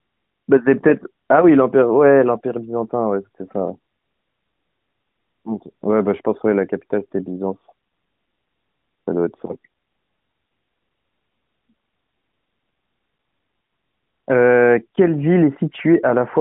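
Nothing stood out as a fault on listening to this speech clip.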